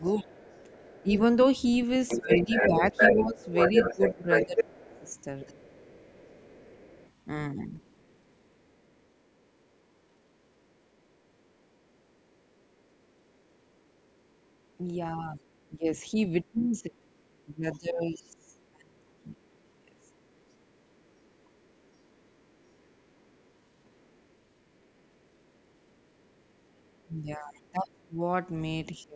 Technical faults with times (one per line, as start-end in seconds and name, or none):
0.00-1.11 speech suppressed in double talk
0.33-9.64 other side's voice leaking through
2.17-5.67 speech suppressed in double talk
11.40-15.68 other side's voice leaking through
15.35-20.13 speech suppressed in double talk
17.13-27.88 other side's voice leaking through
27.07-29.15 speech suppressed in double talk
29.01-29.05 other side's voice leaking through